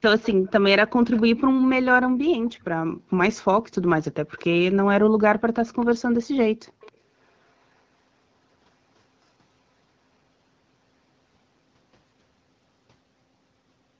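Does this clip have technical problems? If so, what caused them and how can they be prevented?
Yes. An echo leak is heard six times: at 0.22–0.51 s, 1.12–1.22 s, 2.45–2.64 s, 4.37–4.46 s, 5.65–6.02 s and 6.81–6.92 s. Each time a faint, short copy of the speech trails the original by 267 ms, roughly 20 to 30 dB below it. The likely cause is a far end using a loudspeaker whose echo canceller let part of the played-back call reach its microphone, sending it back down the line. Using a headset at that end, or a well-tuned echo canceller with adequate acoustic isolation between speaker and microphone, prevents this.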